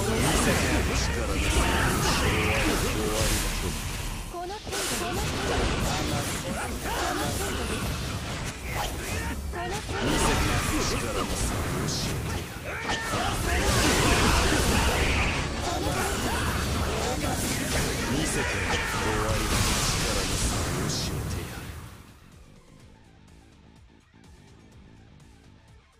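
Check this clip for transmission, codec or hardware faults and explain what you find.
No faults turn up anywhere in the clip. There is nothing to place in time, trace to a cause or describe.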